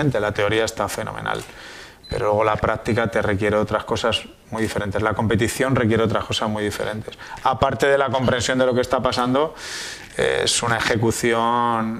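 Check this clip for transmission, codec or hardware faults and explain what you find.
Nothing stood out on listening to this clip.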